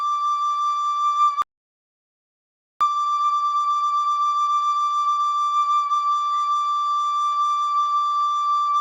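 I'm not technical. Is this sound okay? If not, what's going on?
No, not quite. At 1.42 seconds the music just stops dead and goes silent until 2.81 seconds, a gap of about 1.4 seconds. That's a playback stall: the player had nothing ready to play, likely because it ran out of incoming data or got held up doing something else, so the output simply went quiet until it could get going again.

Right after it restarts, from 2.81 to 5.57 seconds, the music sounds rushed, running at about one and a half times its normal speed while the pitch stays where it should be. That's time-compressed catch-up: to make up for the lost time, the player snips out tiny slices and blends the joins together.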